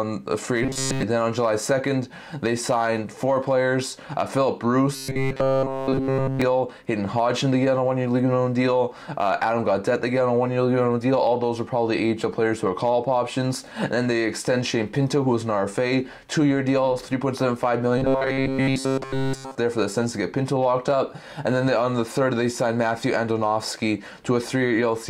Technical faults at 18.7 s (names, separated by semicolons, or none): robotic sound from repeated short buffers